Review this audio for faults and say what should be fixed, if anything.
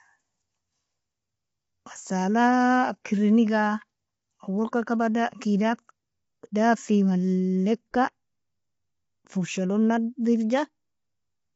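Throughout, the speech sounds rough and grainy, with noise between harmonics and nothing above 7.7 kHz, likely low-delay AAC compression at a bitrate around 24 kbps; plain band-limiting would leave no grain. Encoding at a higher bitrate would prevent it.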